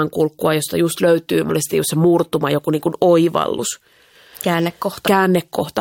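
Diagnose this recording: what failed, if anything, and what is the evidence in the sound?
The codec stage failed: compressed frames were skipped three times. The speech jumps forward at 1.49, 3.58 and 5.06 s. At 1.49 and 5.06 s, about a fifth of a second of audio goes missing, and at 3.58 s only about 50 ms. The jumps fall on a grid of roughly 23 ms frames, so whole frames were lost from the file or rejected as damaged by the decoder.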